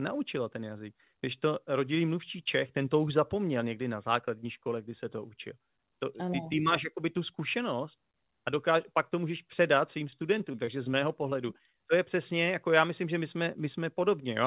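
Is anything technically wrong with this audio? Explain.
Yes, there's repeated packet loss (robotic sound) in two bursts: 10.07 to 10.94 s, right after "to můžeš předat svým", and 11.30 to 11.76 s, just before "to je přesně jako". Packets kept dropping, and each hole, none longer than 20 ms, got patched by stretching the previous sound. So the speech turns choppy, with bits missing. The narrowband call codec underneath cuts everything above 4 kHz.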